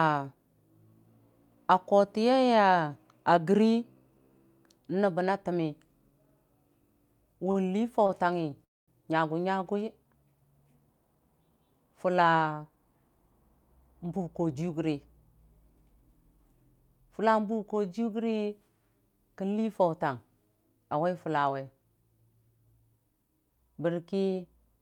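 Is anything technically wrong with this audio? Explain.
Yes, there are a few transport glitches in this speech.

Around 7.51 s and 8.07 s there are short stalls from a late packet: the jitter buffer ran dry, so the last sound gets held for about 41 ms and then 21 ms before it carries on.

From 8.65 to 8.90 s there's a call audio freeze, likely from packets held up in transit. The last sound fades out into roughly 220 ms of silence, then the audio picks up right where it left off.

Between 14.04 and 14.93 s you get a jitter buffer speed-up. The receiver trimmed small pitch-period chunks, around a tenth of a second in total, to cut the backlog, so the speech runs about 11% fast at the same pitch and sounds hurried.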